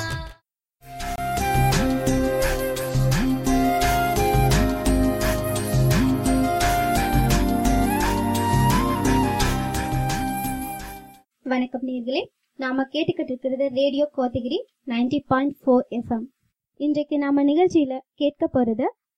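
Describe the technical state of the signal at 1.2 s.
A block of digital silence runs from about 1.16 s to 1.18 s, just before the 1.2 s mark. For roughly 23 ms the sound drops to silence, the kind of gap left when the output buffer isn't filled in time, or when a processing step produces invalid values that get zeroed. The sound cuts out and returns abruptly with no fade, and at this length the whole event is heard as a short hole.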